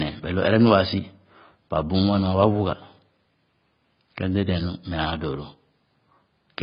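From start to finish the speech sounds dull, smeared and warbling, with sibilants turned to a coarse fizz. That is heavy damage from AAC compression, likely AAC-LC at a very low bitrate, around 16 kbps. To save bits, the encoder discarded everything above 5.1 kHz and quantised the remaining bands coarsely. On a spectrogram the energy stops at a flat ceiling near 5.1 kHz across the whole clip.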